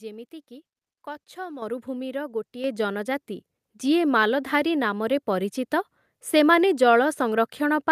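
At 1.62 s the microphone volume stepped up: the input gain was raised in a single jump of about 8 dB, so the speech and the room noise behind it get louder together. At 2.64 s it steps up again, by about 5 dB, just before "ଜନଜାତି ଯିଏ". On a waveform each event shows as a sudden widening of the envelope. A spectrogram shows it as a vertical edge where every band, the noise floor included, brightens at once.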